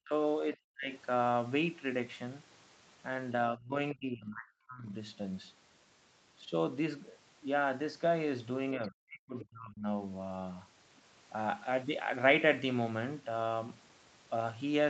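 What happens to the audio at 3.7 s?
Between 3.53 and 3.77 s the speech dips sharply, falling by roughly 20 dB for about a fifth of a second in total. This is likely speech suppressed in double talk: with both sides talking at once, the echo canceller could not tell the near talker from loudspeaker echo and turned the signal down. On the waveform the envelope visibly collapses, and the spectrogram shows the harmonics fading to faint traces before returning.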